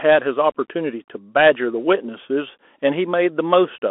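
Across the whole recording the speech sounds boxed-in and phone-like, with scratchy s sounds and a plainly audible granular hiss: a Bluetooth CVSD headset codec. Its one-bit delta coding, which fits a 64 kbps link, leaves roughly 250 Hz to 3.5 kHz and nothing above 3.8 kHz.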